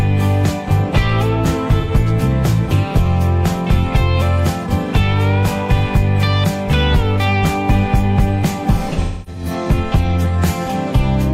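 At 1.80 to 1.92 s, AAC frame loss with concealment leaves a brief smeared, noisy patch, about 85 ms. The decoder rebuilt the missing frames from the last good spectrum. From 8.92 to 9.51 s, repeated losses, the longest around a third of a second, decay toward silence and fade back, without the hard clicks of a plain dropout.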